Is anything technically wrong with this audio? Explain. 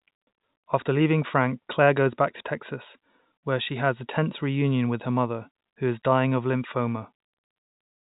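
No, nothing is technically wrong: the speech sits on a standard G.711 mu-law telephone path at 64 kb/s, with the expected cutoff below 4 kHz and at most a faint level-tracking quantisation hiss.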